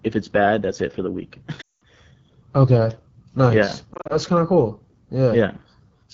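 Speech coded throughout with the AMR wideband (HD Voice) codec, and the damage is plainly audible: the voice sounds rough and raspy, which fits one of the lowest AMR-WB modes, around 8.85 kbit/s, where the pulse-excited vocal tract model has too few bits. Lost AMR speech frames cause two dropouts. From 1.61 to 1.83 s, a 200 ms gap, consistent with ten consecutive 20 ms frames, makes the decoder repeat its last pitch and filter settings at falling gain, so the sound drops to near silence within two frames before recovering rough. From 3.94 to 4.18 s, 100 ms of losses scattered over 160 ms, with no run longer than 40 ms, give a series of brief dips and warbles.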